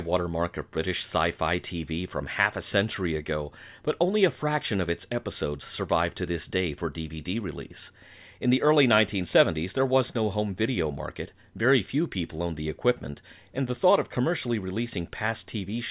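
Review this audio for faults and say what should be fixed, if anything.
No faults found; nothing to fix.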